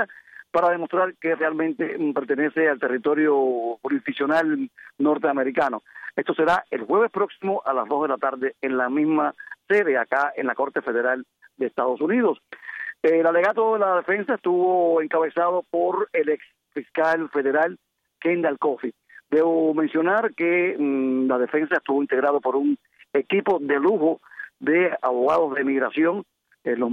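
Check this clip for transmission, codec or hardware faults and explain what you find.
No faults found.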